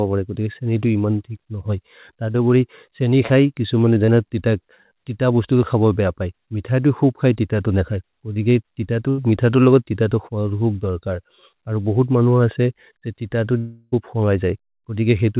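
Short concealed packet loss hits at 2.32, 3.26, 4.06 and 8.34 s. Each time 20 to 40 ms of speech went missing, and the decoder extended the previous sound, leaving a brief smear or wobble. At 9.10 to 9.20 s a burst of packet loss removes about 80 ms. The last sound is stretched and faded, and speech resumes further on. At 13.58 to 13.94 s, a held, fading continuation of the speech lasts about a third of a second, with no full silence, and the speech returns past a gap. A long network dropout is the likely cause. Throughout, the narrow G.711 call path leaves nothing above 4 kHz.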